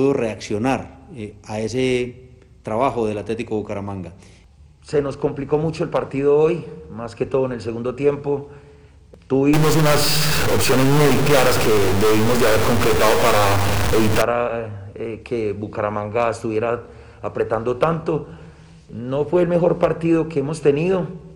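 From 9.53 to 14.22 s the sound turns harsh and buzzy, and quiet gaps fill with steady noise. This points to a stuck bit, likely one data line held at a fixed value, offsetting about half the samples by a step near about -15 dBFS.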